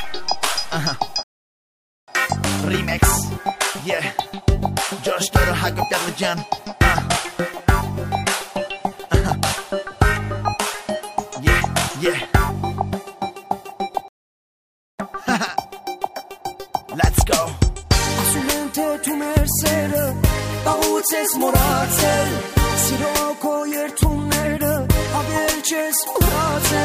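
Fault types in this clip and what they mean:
rebuffering stall: the player used up its downloaded audio and halted until more data arrived, so the sound drops to silence and then picks up exactly where it stopped, at 1.23 s for about 0.85 s and at 14.08 s for about 0.9 s, adding time without losing any.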